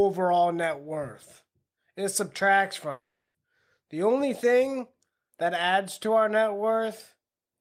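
A long network dropout runs from 2.91 to 3.37 s in this speech recording. For about 0.44 s nothing new is heard: the last sound before the gap is stretched into a fading buzzy hiss, and for the final 0.3 s there is silence. The likely cause is audio that stopped arriving for that stretch, with the receiver filling the hole until it ran out. Speech then resumes further on, with the lost portion simply gone.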